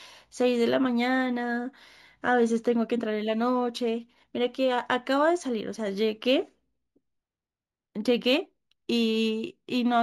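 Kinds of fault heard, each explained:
Imaging from linear upsampling: the rate was raised by joining samples with straight lines, which fits a 16 kHz source brought to 44.1 kHz. That weak filter dulls the top and leaves a mirror image at 8 to 16 kHz, about 35 dB down, heard as metallic shimmer on sibilants.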